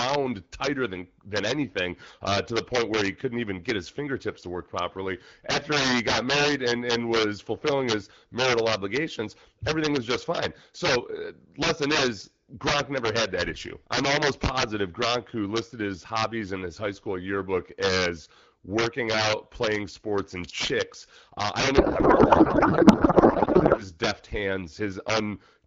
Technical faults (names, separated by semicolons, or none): integer overflow; codec payload misread